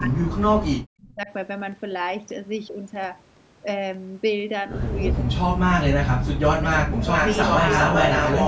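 From the start to 1.3 s, the echo canceller likely could not tell the near talker from loudspeaker echo while both sides talked at once, so it turned everything down. This is speech suppressed in double talk: for about a second the speech drops by as much as about 40 dB. The same thing likely happens again from 5.16 to 6.67 s, with around a second of shallower dips of about 25 dB.

From 6.73 to 6.83 s, the far end's echo canceller likely let part of its loudspeaker pickup through, and that residue was sent back. This echo leak is a short scrap of the speech repeated 390 ms late, about 15 dB below the direct sound. Between 6.84 and 7.08 s, suppression likely clamps down again for roughly 150 ms, cutting the speech by about 30 dB. From 7.0 s to the end, a much stronger echo leak likely returns with the same 390 ms delay, now about as loud as the speech itself, so a second, lagging copy runs on top of the talker. 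The audio carries nothing above 8 kHz, which is the normal ceiling of the call's microphone processing.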